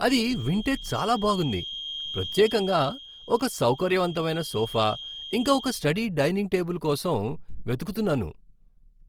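From the first moment to the end of the speech, the signal has likely been through Opus compression in its music (CELT) mode at a low rate, around 24 kbps. The encoder keeps each band's overall energy but lacks the bits to code the fine detail, so it fills the gaps with folded or noise-like content. The voice therefore sounds rough and grainy rather than swirly, and the damage is plainly audible. The full bandwidth survives, with content reaching up to about 20.2 kHz.

Also from the start, and running until 5.86 s, the loudspeaker-to-microphone loop is likely sitting just at the edge of instability. That produces a feedback whistle at 3.2 kHz which rings steadily without building up. It shows as a thin tone at one pitch that slowly swells and fades, about 15 dB below the speech. It stops just before "డైనింగ్ టేబుల్".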